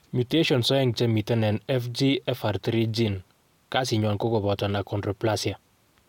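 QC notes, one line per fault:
No faults to note.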